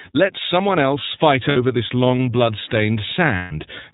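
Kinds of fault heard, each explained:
iLBC codec: A narrowband VoIP codec that codes each frame's excitation independently, and the sound points to 30 ms frames at about 13.33 kbps. The speech comes across plainly rough and synthetic. A spectrogram shows a hard ceiling with nothing above 4 kHz.
lost iLBC frames: Missing packets are concealed by repeating the last pitch cycle mixed with noise. After "someone else fight" at 1.49 s, a 60 ms buzzy held vowel replaces the speech before "this long". A 150 ms gap at 3.36 s fades out. Waveforms show closely repeated cycles with added noise, and the spectrogram shows flat, unchanging harmonics.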